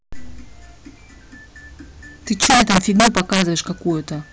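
From 2.42 to 3.42 s the speech suffers integer overflow: gain pushed about 9 dB past full scale wraps each peak to the opposite sign instead of limiting it. Violent cracks result, appearing as full-range vertical jumps in the waveform and broadband streaks on a spectrogram.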